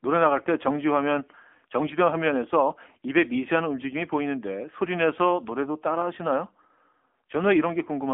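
From start to end, the speech carries AMR narrowband mobile codec damage. Nothing above 3.4 kHz survives. Low bits, likely near 7.95 kbps, make the voice buzzy and synthetic.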